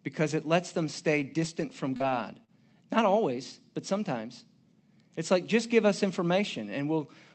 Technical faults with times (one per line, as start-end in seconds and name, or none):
1.19-2.51 scattered short gaps